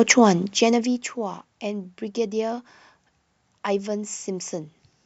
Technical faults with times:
0.31-1.15 zipper noise

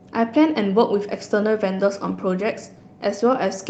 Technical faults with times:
none

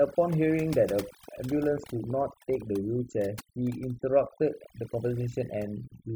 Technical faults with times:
0.00-6.16 overdone noise removal
1.28-2.63 train of clicks

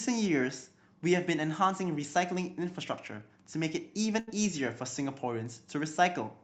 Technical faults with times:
4.19-4.29 burst of packet loss

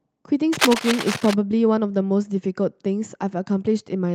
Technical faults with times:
0.53-1.34 cable scratch noise

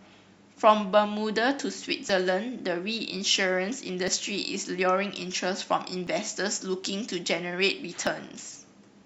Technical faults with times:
2.09 overlap between stream segments
4.08 overlap between stream segments
6.07 overlap between stream segments
8.07 overlap between stream segments

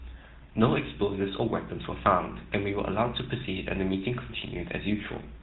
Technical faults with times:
0.00-5.42 GSM full-rate codec
2.38-2.42 GSM bit errors

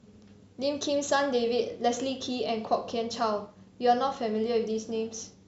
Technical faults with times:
none

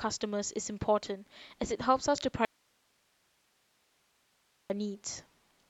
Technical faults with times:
2.45-4.70 audio dropout to a faint residue

